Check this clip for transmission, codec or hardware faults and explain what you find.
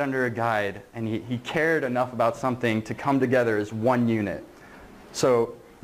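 Nothing audible in the signal points to a fault in how it was carried, encoded or captured.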